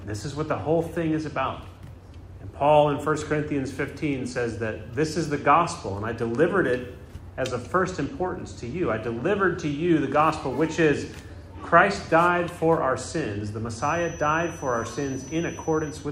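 From 13.7 s to the end, a feedback whistle sits behind the sound: a thin, steady tone at 6 kHz, around 20 dB below the main signal, swelling and fading slowly in level. The likely cause is a loudspeaker-to-microphone loop hovering just at the feedback point, sustaining one frequency without escalating. Unlike a runaway howl it never builds into a howl, and unlike mains hum it is a single high pitch with no low harmonic series.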